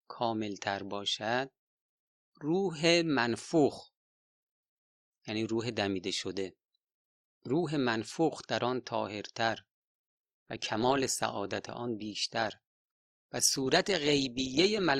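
At 9.47 s the speech switches abruptly, with no gap, to an adaptive stream at a lower bitrate: the connection slowed, so the player swapped in a cheaper encode until the end. Codec artefacts rise, consistent with a drop from roughly 64 to 24 kbit/s Opus. On a spectrogram the detail suddenly smears into blocky patches, while the waveform stays continuous.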